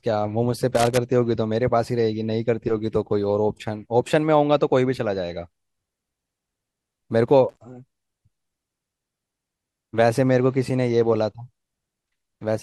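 At 0.75 to 0.98 s, and again at 7.49 to 7.57 s, the speech is broken by loose connector crackle: a worn or dirty contact briefly opens and closes, chopping the signal. It sounds like a ragged scratch over the voice. On a waveform, the envelope shows abrupt gaps and sharp spikes. On a spectrogram, there are irregular vertical broadband streaks across those two stretches.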